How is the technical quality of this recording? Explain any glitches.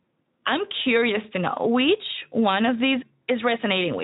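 No glitches can be heard.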